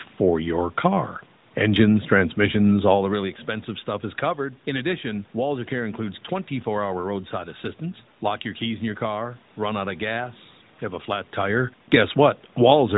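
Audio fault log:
No faults to log for this audio.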